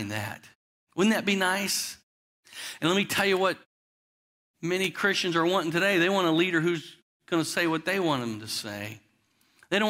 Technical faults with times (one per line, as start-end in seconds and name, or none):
none